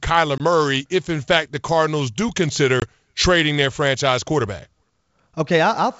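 A speech recording over a G.722 wideband call, here at 64 kbit/s, suffers packet loss on an ADPCM call twice: single lost packets, about 20 ms of audio each, are replaced by silence. At 0.38 to 0.42 s and again at 2.80 to 2.86 s, a hard-edged gap opens, and because the decoder's predictor and step size no longer match the sender's, the speech resumes with brief distortion before "if in fact the" and "trading their franchise quarterback".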